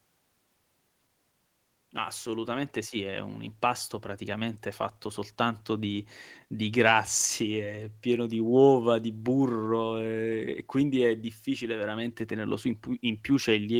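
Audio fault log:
No faults detected in the speech recording.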